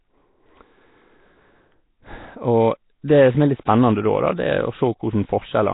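Throughout the speech, Nellymoser compression is the likely cause of heavy codec damage. Weak bands seem to get no bits and are filled with noise. The speech sounds rough, hissy and smeared, as if underwater. Nothing is heard above 3.9 kHz, which fits about 16 kbps.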